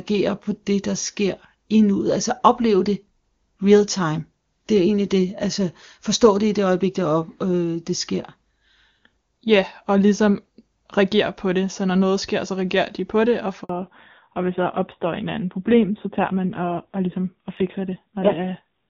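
At 13.63 s the sound cuts out for 60 ms, until 13.69 s. This is a handover gap. The call switched networks, and no frames arrived during the changeover. The audio drops away quickly, then silence fills the hole. Whatever was said there is gone.

From 13.69 s to the end, the call falls back to narrowband. Before this, the HD Voice path sounds clean, which fits a high AMR-WB rate. Now nothing above 4 kHz remains. The speech turns dull and rougher, which points to a low-rate narrowband codec.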